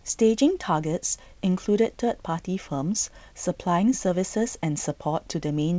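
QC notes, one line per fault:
Nothing to flag here, just speech coming through the G.722 wideband telephone coding at 64 kbit/s the way that link normally sounds.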